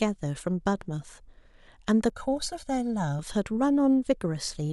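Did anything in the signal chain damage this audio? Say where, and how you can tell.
Yes. From 2.10 to 3.19 s the speech turns hollow and phasey: channel delay (comb filtering), where one channel lags roughly 1.5 ms before the mono sum, notching from around 400 Hz.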